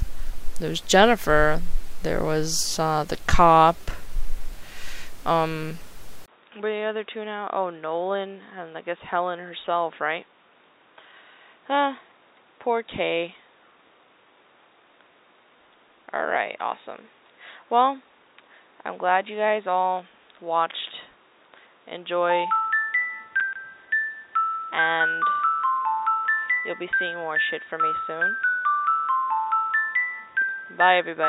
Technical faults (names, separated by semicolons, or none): input switched to a poorer device